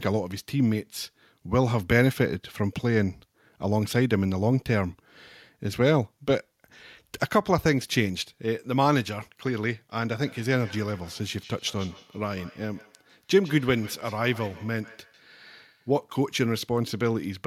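Speech with a feedback echo between two devices from 10.2 to 16.02 s: each word returns roughly every 150 ms, peaking about 22 dB below the speech. A second device in the room replays the call and the first device's microphone sends the sound back, beyond the reach of either echo canceller.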